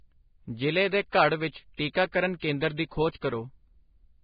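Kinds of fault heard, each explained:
Vorbis compression: likely low-bitrate Vorbis encoding, around 16 kbps, cuts off above 4.9 kHz and coarsely quantises the treble, leaving the speech heavily hissy, grainy and dull.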